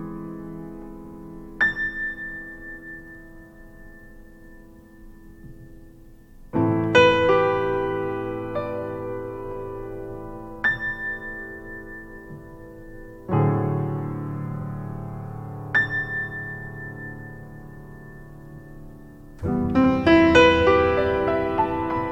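Repeated frames stutter the sound at 1.05–1.19 s, 14.61–14.65 s and 19.83–19.86 s, where blocks of 70, 46 and 23 ms were replayed, lengthening the audio. Each shows as a duplicated waveform segment and a repeated spectrogram slice.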